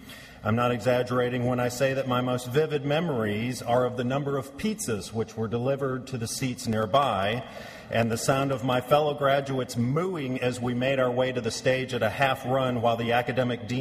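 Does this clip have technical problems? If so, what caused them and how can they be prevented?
Yes. From 6.63 to 8.83 s, a steady ticking runs through the sound, a click every 0.1 s, around twenty in all. These are periodic USB or driver dropouts: something stalls the audio driver or USB bus at that fixed rate, and each time roughly a millisecond of signal is replaced by silence. Preventing it means finding and disabling the background task that polls at that interval, and giving the audio interface a dedicated USB port with a larger buffer.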